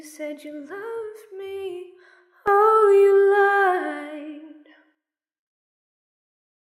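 At 2.48 s the level leaps up by about 12 dB, sound and background noise together, and stays raised until 4.95 s, when it drops back just as abruptly. This sudden gain jump likely comes from a digital gain change applied instantly, with no ramp.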